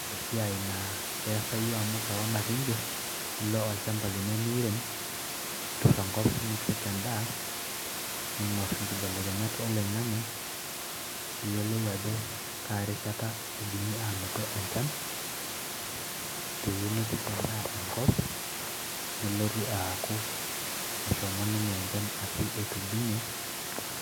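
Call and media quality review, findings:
No faults found in this speech clip. Room noise sits about 8 dB below the speech, part of the recording environment rather than the system.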